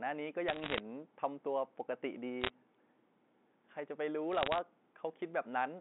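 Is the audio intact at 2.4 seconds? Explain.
No, there's a short burst of bit errors on a digital phone line from about 2.41 to 2.50 s. Roughly one bit in a hundred gets flipped on the G.711 line, each flip knocking a single sample off, so you hear a quick patch of sharp ticks and crackle sitting over the speech.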